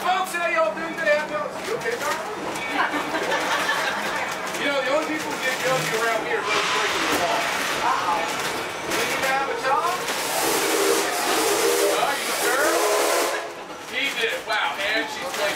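No technical faults can be heard anywhere in the audio.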